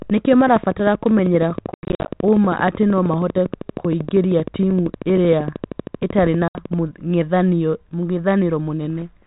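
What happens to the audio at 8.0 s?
Nothing goes wrong at 8.0 s: the speech there is intact, carried through the 32 kbit/s G.726 ADPCM path with only the light coding texture of that telephone-band codec.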